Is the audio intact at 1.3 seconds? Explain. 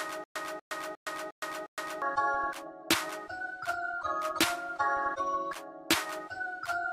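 No. A stutter with silent gaps runs from the start to 2.02 s: a 240 ms burst repeats about every 356 ms with 116 ms of silence between, likely from a stalled player or stream.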